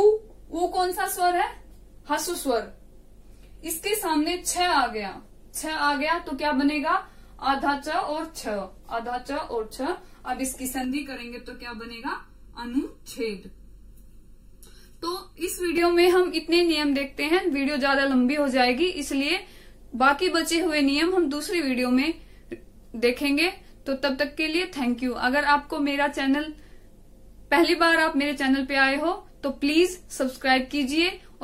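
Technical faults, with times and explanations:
10.84–15.78 s, channel delay (comb filtering): one channel arrives late by less than a millisecond before the pair is folded to mono, so shared content cancels at evenly spaced frequencies starting near 700 Hz, leaving the sound hollow and phasey with fixed spectral notches.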